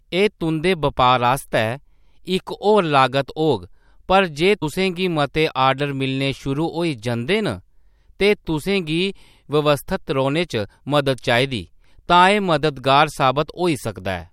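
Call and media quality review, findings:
Compressed frames skipped at 4.61 s, just before "गी मते". Decoder side: several consecutive compressed frames missing from the stream or rejected as damaged, so playback resumes later in the speech. About a tenth of a second of audio is lost, consistent with roughly four frames of about 26.1 ms each. Overlapping frames smear the join into a short blip, not a hard click, and the speech jumps forward abruptly.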